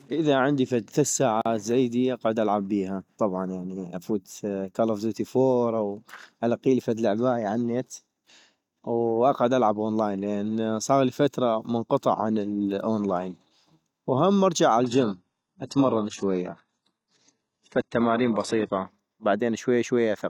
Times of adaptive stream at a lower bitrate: 14.84-18.84

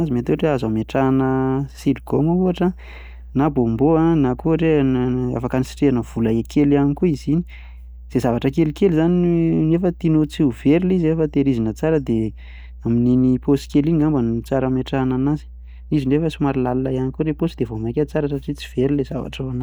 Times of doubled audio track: none

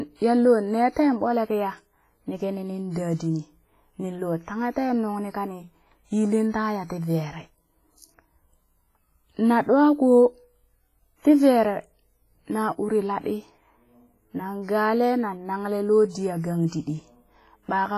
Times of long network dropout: none

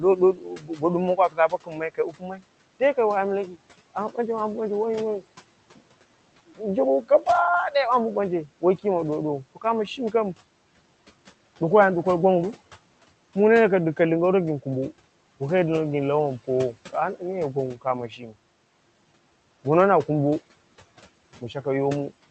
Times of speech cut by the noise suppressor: 0.00-2.43, 18.08-18.33

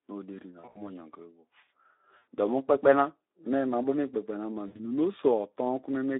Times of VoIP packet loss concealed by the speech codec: 0.59-0.82, 2.17-2.25, 4.67-4.80

